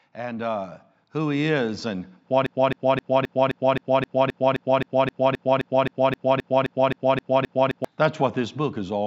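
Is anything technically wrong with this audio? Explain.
Yes, there are two faults.

From 0.13 to 2.13 s there is automatic gain rising. The gain control judged the input too quiet and raised its gain by about 7 dB over two seconds. Voice and background swell together, which tells it apart from someone simply speaking louder.

From 2.46 to 7.85 s a broken-record loop repeats one 0.26 s fragment 21 times, back to back and identical each time. The likely cause is a stalled player, encoder or stream resending its last buffer. The audio from that span is lost. The exact repetition distinguishes it from a stutter or an echo.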